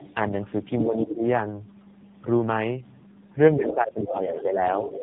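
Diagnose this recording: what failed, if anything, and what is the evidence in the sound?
Tandem speech coding at the codec stage runs through the whole clip. Nothing is present above 3.8 kHz, and the speech has the compounded roughness, muffling and warble of narrowband coding applied more than once. The character points to two low-rate speech coders in series, such as an iLBC leg and an AMR-NB leg, joined through a G.711 link. The second coder re-encodes the first coder's artefacts as if they were signal, so the errors stack.

The other side's voice leaks through at 0.79–1.02 s, 3.66–3.75 s, 4.04–4.16 s and 4.37–5.02 s. It sits about 5 dB below the main talker in the first three spots and about 10 dB below in the last, which is the longest. This is call processing: the far end's loudspeaker output is reaching the microphone. The likely cause is an echo canceller that did not fully model and subtract that acoustic path.

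Speech is suppressed in double talk at 0.85–1.25 s and 3.56–4.60 s, overlapping the leakage. The near talker's level dips by as much as roughly 15 dB in the first stretch and roughly 10 dB in the second. Around 300 ms of the first span is affected, and nearly a second of the second. With both sides active, the canceller's suppressor likely treated the talker as echo and attenuated both signals together.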